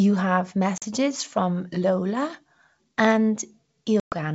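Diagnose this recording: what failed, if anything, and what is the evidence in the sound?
The fault is packet loss on an ADPCM call, at the network stage, on a G.722 wideband link whose coding still sounds clean. The speech drops to hard-edged silence at 0.78–0.83 s (about 40 ms, a couple of packets) and at 4.00–4.13 s (about 120 ms, several packets). On return, the decoder's predictor and step size lag the sender's, giving slightly distorted speech that settles within tens of milliseconds. A buffer underrun leaves gaps that resume cleanly.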